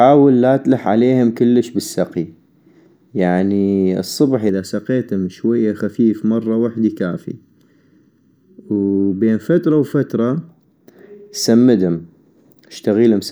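Channel delay (comb filtering) runs from 4.49 s to 10.49 s. One channel of the recording arrived late by a little under a millisecond, and when the two were combined into mono, the sound they shared cancelled at evenly spaced frequencies. The first notch sits around 700 Hz, with further notches repeating up the spectrum at regular intervals. Across those six seconds the speech takes on a hollow, phasey colour that stays fixed in place.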